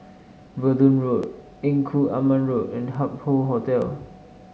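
Speech with three sharp, isolated clicks at 1.23, 2.95 and 3.82 s, each a thin vertical line across the spectrum. These are likely dropped samples: roughly a millisecond missing each time, so the waveform jumps straight to a later value, too briefly to remove audible sound.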